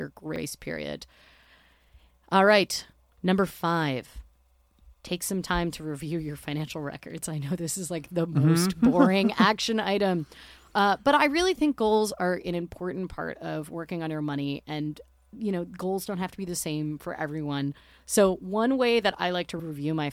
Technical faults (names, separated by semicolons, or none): repeated buffer